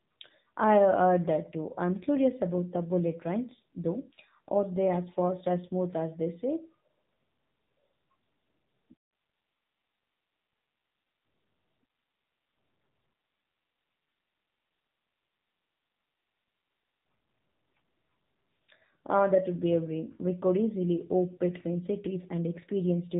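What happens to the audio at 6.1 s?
AMR narrowband mobile codec damage is present at 6.1 s, as it is throughout the clip. The speech is coded at 8 kHz with a vocal-tract model, so nothing above 4 kHz survives, and the plainly buzzy, synthetic tone fits a low rate of about 7.4 kbps.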